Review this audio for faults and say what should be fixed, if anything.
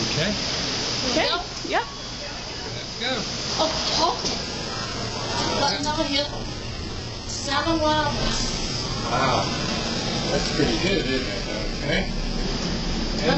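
From 4.43 to 12.43 s the sound abruptly loses everything above 8.1 kHz and codec artefacts rise, with no gap. This is an adaptive stream at a lower bitrate, pointing to a drop from roughly 96 to 8 kbit/s. To prevent it, record from a stable connection or capture the source directly rather than the adaptive stream.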